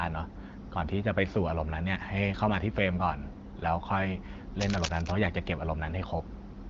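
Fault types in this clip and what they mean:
Cable scratch noise: A burst of dense, uneven crackling runs over the speech from 4.6 to 5.1 s, for about half a second. It sounds like scratching or rustling. It is fairly loud, sitting only a little below the speech itself. The likely cause is a worn cable, plug or control being moved. Its contact resistance then shifts rapidly, and each shift leaks a jagged spike of noise into the signal.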